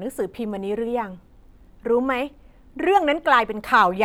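No technical faults can be heard anywhere in this speech recording.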